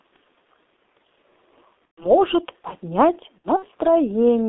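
The speech runs through a G.723.1 codec for its whole length, with heavy damage consistent with the 6.3 kbit/s mode. The line passes only about 250 Hz to 3.6 kHz, and the coarse, slowly updated voice model leaves the sound muffled and hoarse, with smeared consonants.

From 1.86 to 2.15 s, VoIP packet loss is concealed by the speech codec. About 120 ms of audio is missing, and the decoder fills the gap by extending its last pitch and filter at falling gain. The result is a stretched, fading sound, and the speech stays weak briefly afterwards.

From 3.38 to 3.65 s, a second concealed loss of about 120 ms is spread over roughly 240 ms, with the longest gap 60 ms. It sounds like separate short stretched patches rather than a single fade.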